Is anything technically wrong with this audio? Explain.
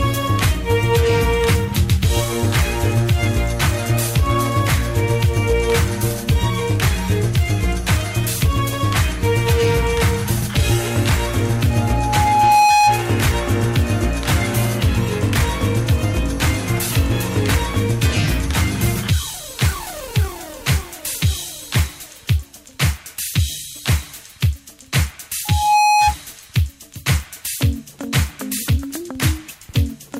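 Yes. Loudspeaker feedback squeal occurs twice, from 11.70 to 13.06 s and from 25.45 to 26.15 s. A microphone is picking up the loudspeaker it feeds, and at 835 Hz the loop gain exceeds unity, so that frequency grows by itself. Each time, a single 835 Hz tone swells up over the audio, taking about a second the first time and well under half a second the second time, and peaks roughly 5 dB above the rest of the sound before it stops.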